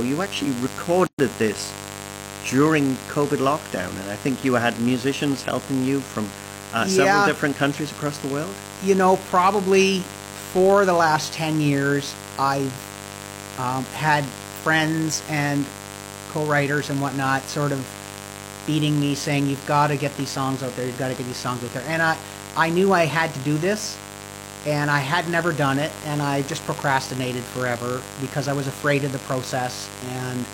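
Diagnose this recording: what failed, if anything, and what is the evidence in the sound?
A dimmer, rectifier or missing shield in the analogue wiring lets switching spikes ride on the 50 Hz mains, adding harmonics up into the kilohertz range. The result is a steady, raspy mains buzz, about 15 dB below the speech, running through the whole recording.

At the codec stage, separately encoded pieces were joined without trimming the start-up delay and end padding. A gap at a join of encoded pieces opens from 1.07 to 1.19 s, about 117 ms long, right after "you actually", with smeared edges before the speech resumes.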